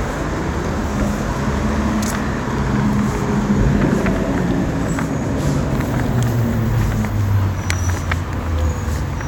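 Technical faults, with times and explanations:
0.67 to 0.70 s, repeated frames: a single block of compressed audio about 26.1 ms long was delivered to the decoder twice. The decoder simply played that slice again, so the sound hiccups with a brief stutter as the same fraction of a second repeats, and any mismatch at the join adds a small blip. Everything after this point runs 26.1 ms later than it should.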